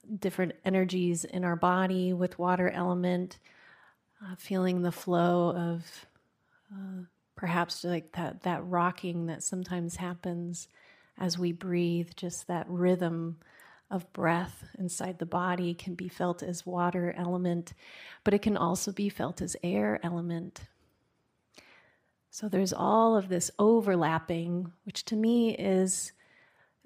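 A speech recording, and nothing is technically wrong with it.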